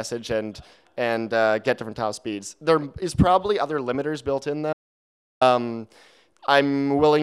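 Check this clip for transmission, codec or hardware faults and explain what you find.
There is one fault, an audio dropout to silence from 4.73 s to 5.41 s, about 0.68 s long. The sound cuts off abruptly and resumes just as abruptly, with nothing in between, not even room tone. The likely cause is a momentary loss of the input signal, such as a disconnect or mute, while recording continued writing zeros. The waveform shows a flat line, and the spectrogram a fully blank vertical band.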